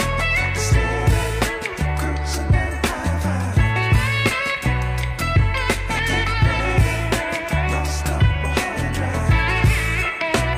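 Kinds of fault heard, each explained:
No kinds of fault are heard in this clip.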